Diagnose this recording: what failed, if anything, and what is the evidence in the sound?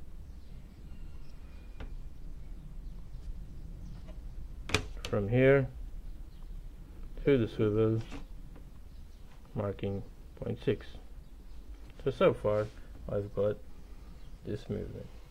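Nothing in the signal chain appears to have failed: across the whole recording the audio holds steady, with no dropouts, discontinuities, level jumps or timing irregularities pointing to any stage between capture and playback.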